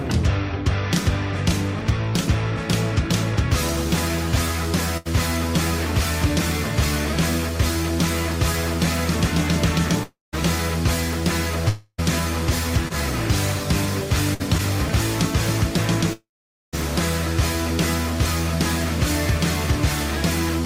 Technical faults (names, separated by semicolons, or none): burst of packet loss; long network dropout; short concealed packet loss